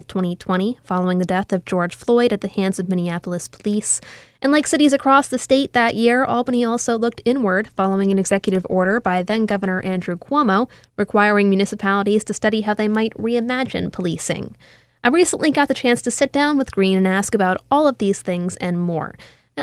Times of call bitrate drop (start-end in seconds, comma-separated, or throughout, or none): 7.61-10.15